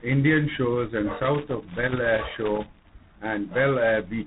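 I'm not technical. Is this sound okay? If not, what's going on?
No. The call passed through several different telephone links in turn, each squeezing the voice with its own coding, so it was unpacked and squeezed again at each handover. This tandem speech coding makes the voice rough and noisy throughout, with nothing above about 3.9 kHz.

From 1.20 to 2.92 s, a worn or dirty plug or socket somewhere was briefly losing and regaining contact. This loose connector crackle breaks the sound up into an irregular burst of scratchy crackling.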